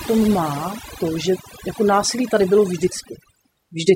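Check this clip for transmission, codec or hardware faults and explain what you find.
One fault runs through the whole speech clip: overdone noise removal. An over-aggressive noise reducer cuts frequency bands near its noise estimate, leaving near-silent backgrounds with twinkling specks.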